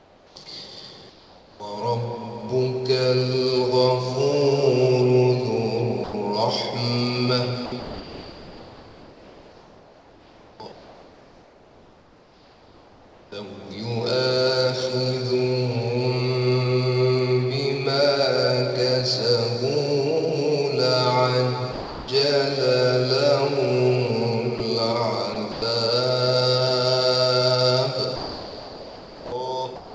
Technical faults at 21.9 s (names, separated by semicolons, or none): sound dropped by the voice detector